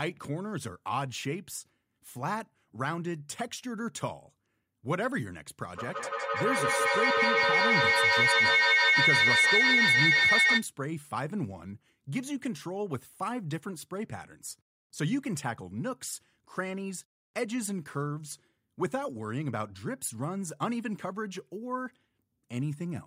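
From 5.73 to 10.68 s, feedback howl builds near 2 kHz, with repeats about every 150 ms, reaching about 9 dB above speech; a spectrogram shows a bright, growing horizontal line.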